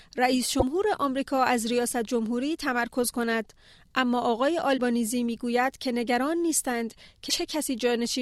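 At 0.57 to 0.63 s, 4.74 to 4.79 s and 7.26 to 7.31 s the audio breaks into brief blips, each about 50 to 65 ms long, caused by damaged data in a compressed stream. At each point some bytes of the encoded stream were corrupt, so the decoder misread the affected frames, lost sync and had to search for the next valid frame header. The result is a short chirp, squawk, click or hole that interrupts the sound.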